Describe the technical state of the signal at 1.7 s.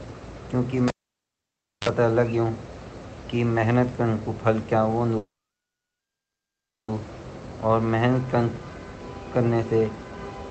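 At 1.7 s the signal is inside a cable pulled and plugged in event spanning 0.88 to 1.89 s. The line is disconnected for about 0.96 s after an opening pop, so this moment is near silence, before a 49 ms burst of 50 Hz mains buzz and a reconnection pop.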